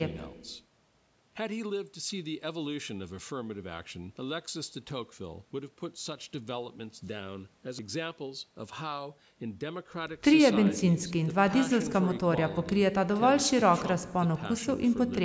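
Nothing here counts as a fault: the speech simply carries the usual marks of call microphone processing, with the lowest bass trimmed away by its high-pass filter and nothing above 8 kHz, both just what that path normally does.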